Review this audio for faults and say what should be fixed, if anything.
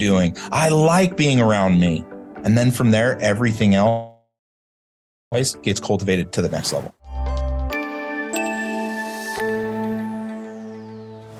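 There's a long network dropout from 3.89 to 5.36 s. The sound trails off into a fading noise, then goes quiet for about a second before coming back. About a second of audio is simply gone, and the gap points to a delay jump of roughly 0.4 s on the link, likely from congestion or a stalled route. To prevent it, add redundancy or FEC and check the network path for bursty loss.

Right after that, two jitter buffer speed-ups kick in, from 5.54 to 7.05 s at about 111% speed and from 8.27 to 10.89 s at about 109%. The buffer had piled up excess audio after the late packets arrived in a bunch, so the receiver trimmed tiny pitch-period slices over and over. That shaves off roughly 0.2 s and 0.3 s, so the sound rushes along at the same pitch. To prevent it, let the buffer drain more gently over a longer span, or cap how fast it compresses.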